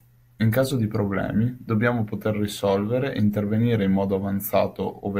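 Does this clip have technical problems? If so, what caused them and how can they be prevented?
No, there are no technical problems to report here.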